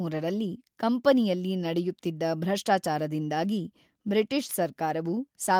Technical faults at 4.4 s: none

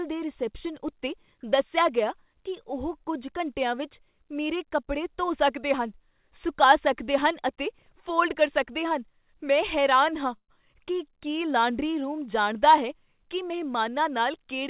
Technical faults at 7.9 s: none

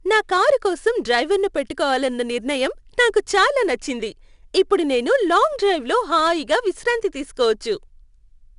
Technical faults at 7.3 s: 4-bit ADPCM compression

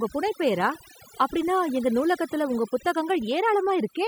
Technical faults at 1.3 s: overdone noise removal

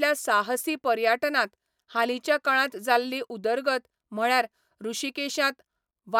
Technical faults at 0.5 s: none

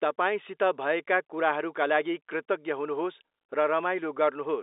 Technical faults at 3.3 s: none

